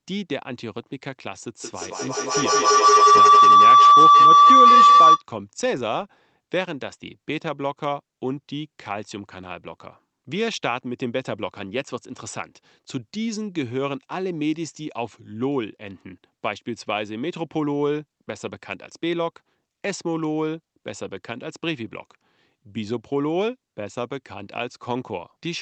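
A speech recording carried over a call, with a high-frequency cut-off near 8 kHz that fits a wideband call codec such as Opus. From 1.60 to 5.26 s a feedback howl builds: sound from a loudspeaker re-enters a microphone in the same room and gains level on each trip around the loop. It narrows to a tone around 1 kHz, its repeats come at roughly 200 ms intervals, and it peaks about 13 dB above the speech before the loop breaks.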